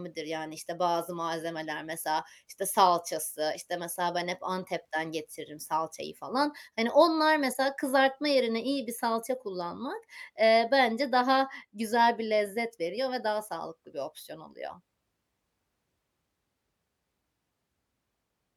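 No technical faults can be heard in this speech recording, so there are none to describe.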